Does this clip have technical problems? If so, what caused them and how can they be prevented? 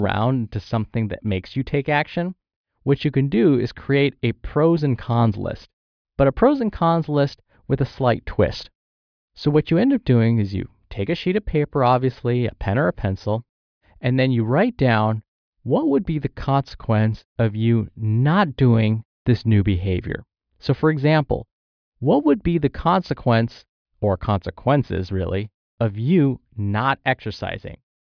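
No, this clip has no technical problems, so there is nothing to prevent.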